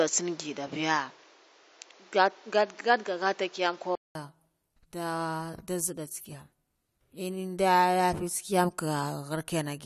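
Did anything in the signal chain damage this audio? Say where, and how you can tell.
Yes. From 0.0 to 4.15 s the speech is band-limited, with nothing above 7.6 kHz, a noise floor roughly 30 dB down and a level a few dB off. A 200 ms gap then brings fuller sound. This is likely an input switched to a poorer device, not a codec band limit, which wouldn't change noise and level at one abrupt switch point.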